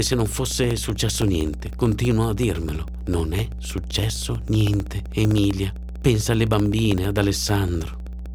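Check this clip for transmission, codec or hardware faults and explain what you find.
Two faults are present. Mains hum runs through the whole recording. Periodic USB or driver dropouts tick steadily from 0.07 s to 8.26 s.

The mains hum sits at 60 Hz, loud, roughly 10 dB below the speech. A ground loop or nearby transformer leaks the power line into the signal. It sounds like a constant low drone under everything.

The periodic USB or driver dropouts arrive every 64 ms, well over a hundred times. A background task stalls the audio path at that fixed interval. Each time, about a millisecond of audio becomes silence. This is heard as a regular ticking over the speech.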